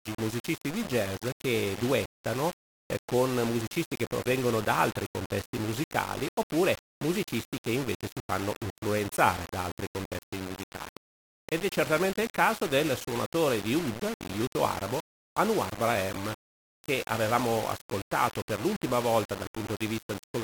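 From start to finish the sound is coated in a coarse, grainy distortion that rises and falls with the sound itself, sitting only about 10 dB below it, with quiet passages turning gritty. This points to low bit depth without dither: the audio was likely reduced to just 5 bits and rounded to the nearest step with no added noise, so the error tracks the sound.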